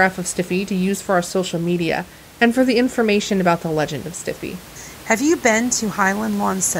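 Nothing in the speech recording points to a technical fault, and the only thing under it is the room's own background noise, sitting about 21 dB below the speech.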